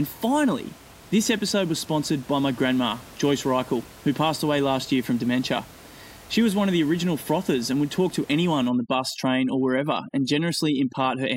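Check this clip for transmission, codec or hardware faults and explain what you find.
One fault is present, and it sits at the end of the clip.

Overdone noise removal, from 8.69 s to 11.36 s, just after "would talk to anyone": the denoiser's suppression is set too aggressively, so frequency bands close to its noise estimate get pulled down or shut off, and faint parts of the speech are removed along with the room noise, which is about 24 dB below the speech. The background drops and breaks up into twinkling specks.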